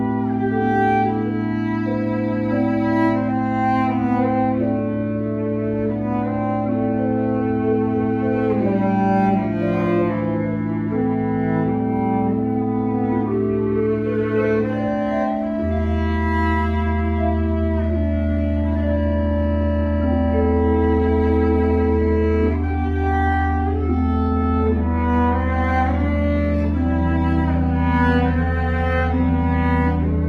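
At 18.15 s the adaptive stream drops to a lower bitrate: the player switches to a leaner encoding, likely because the connection slowed, and stays there to the end at 30.28 s. The switch is instant, with no gap. From then on codec artefacts grow more obvious. The change fits a step down from about 64 to about 24 kbit/s Opus.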